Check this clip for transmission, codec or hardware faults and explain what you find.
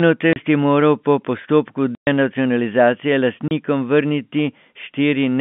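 There's one fault here, packet loss filled with silence, and it shows up three times in the speech. You get a 30 ms hole at 0.33 s, a longer 120 ms gap from 1.95 to 2.07 s, and another 30 ms hole at 3.48 s. Packets went missing and the receiver just played nothing in their place, so the speech drops out abruptly with hard edges. The short holes fit a single lost 30 ms packet, and the long one fits four in a row. All of this sits on a narrow telephone band from the G.711 line.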